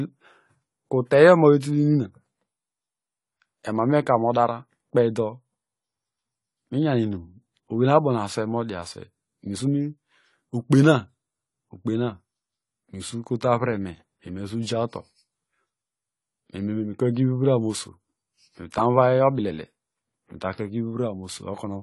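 A speech clip with plainly audible AAC compression throughout: nothing survives above 11.5 kHz, and sibilants come out smeared and fizzy, pointing to AAC-LC at a low bitrate near 32 kbps as the likely cause. A plain low-pass filter would dull the top cleanly, without this warbling, smeared texture below the cut-off.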